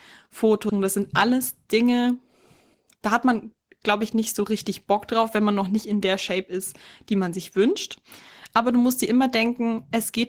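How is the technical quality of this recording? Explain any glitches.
The speech has two timing glitches near the start.

At 0.69 to 0.80 s there is a skip ahead. A stretch of speech, roughly 0.4 s, never plays. It was dropped while later audio was already waiting. The receiver then jumped straight to that later audio with no gap. You hear a sudden splice. Part of a phrase simply vanishes, and the two sides butt together.

From 1.26 to 1.90 s comes a jitter buffer speed-up. The buffer was holding more audio than its target. To trim the delay, the receiver cut out many tiny slices, each a pitch period or so long. Together they come to a few tens of milliseconds. Playback runs about 5% fast. The pitch stays the same, but the speech sounds slightly rushed.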